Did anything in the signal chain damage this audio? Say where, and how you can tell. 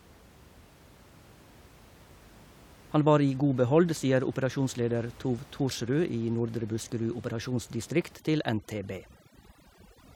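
Yes. The damage comes from the call-processing stage, where overdone noise removal sets in at 8.16 s and runs to the end of the clip at 10.15 s. The suppressor is too aggressive: it cuts individual frequency bands almost to nothing whenever they sit near its noise estimate, so the room noise, about 25 dB below the speech, vanishes into near silence with twinkling specks. Quieter parts of the speech are removed with it.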